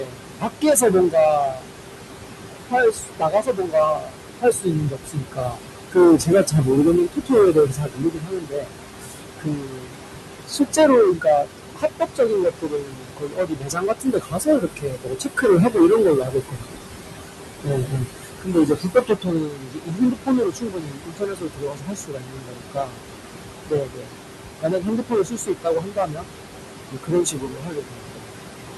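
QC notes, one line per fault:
throughout hard clipping: The level is driven about 14 dB past what the signal path can pass, so a large share of the waveform, around one sample in seven, is cut flat at the ceiling. Those squared-off tops add dense high harmonics, heard as a harsh fuzz on every loud syllable rather than occasional crackle. Unlike codec distortion, it follows loudness exactly: quiet passages stay clean and the buzz appears only as the level rises.
throughout noise suppressor artifacts: The room noise sits only about 7 dB under the speech, so the suppressor works hard, pulling the noise down by about 21 dB frame by frame. The background drops away in gaps and swells back under each phrase. This is a pumping, frequency-dependent residue that tracks the speech, not a fixed hiss or a gate opening and shutting cleanly.
0.0–1.66, 2.62–5.59, 5.91–10.0, 10.47–16.78, 17.63–23.03, 23.67–24.13, 24.62–26.29, 26.88–28.34 s speech cut by the noise suppressor: Across these spans the suppressor mistakes soft parts of the speech for noise and turns them down by as much as about 22 dB, affecting well over half of each span in the longer stretches. 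Weak consonants, word endings and quiet phrases sound swallowed or faint while loud vowels stay clipped and present. It is uneven, selective loss within phrases, not a whole-signal level drop or dropout.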